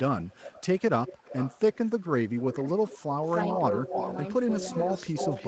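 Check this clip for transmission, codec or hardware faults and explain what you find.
Two faults are present: a recurring echo leak and a brief case of speech suppressed in double talk.

Echo leak at 0.22–0.82 s, 1.06–3.03 s, 3.23–4.28 s and 4.72 s to the end: likely a far-end loudspeaker echo canceller letting its pickup through. A copy of the speech returns about 0.31–0.33 s late, from roughly 20 dB down to as close as about 5 dB below the speech.

Speech suppressed in double talk at 2.56–2.66 s: the echo canceller likely misread the overlap as echo and attenuated everything. The speech dips by about 10 dB for roughly 100 ms.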